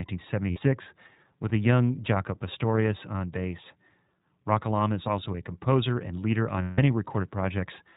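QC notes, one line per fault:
Throughout, iLBC codec: the whole thing is squeezed into narrowband, so nothing above 4 kHz survives and the top end sounds boxed in. The coding damage is plainly audible, giving the speech a slightly rough, synthetic grain, because each short frame's excitation is rebuilt on its own rather than carried smoothly from the last. The character fits iLBC's 20 ms, 15.2 kbps mode.
0.50–0.58 s, lost iLBC frames: a short dropout, about 60 ms, consistent with three missing 20 ms frames. The decoder fills it by looping the last pitch cycle with a bit of noise mixed in, so you hear a brief held, faintly buzzy vowel instead of a hole. Since iLBC frames stand alone, the voice snaps back cleanly right after.
6.62–6.79 s, lost iLBC frames: a longer gap of about 160 ms, which fits eight dropped frames. The same pitch-repeat concealment stretches over it, and because the loss runs long, the held, breathy tone fades down as the decoder gives up extending it. 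Recovery is again almost immediate once good frames return.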